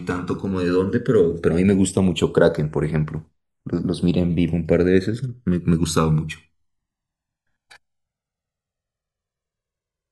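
Throughout the speech, the channels drift apart. Their clocks disagree by roughly 300 ppm, so the inter-channel delay creeps toward about 2 ms. Mixed to mono, this sounds like slow flanging.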